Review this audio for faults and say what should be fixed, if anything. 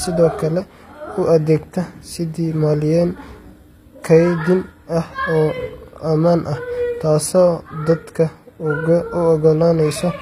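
HE-AAC compression across the whole clip: the treble sounds synthetic, with s sounds turning gritty and lispy and nothing above 15.5 kHz, likely from band replication rebuilding the upper spectrum from copied lower bands, which fits a low bitrate near 24 kbps. Encode at a higher bitrate, or use plain AAC so the treble is coded directly rather than rebuilt.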